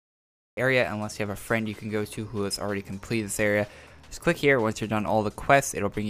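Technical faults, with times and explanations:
0 to 0.57 s, cut-off start: the clip opens on flat digital silence, then at 0.57 s the sound appears already in progress, with no natural attack or fade-in. Capture began late, partway through the sound, so its beginning was never recorded.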